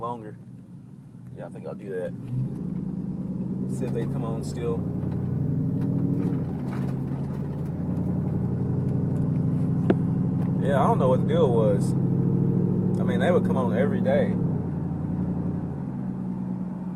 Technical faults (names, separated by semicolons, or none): none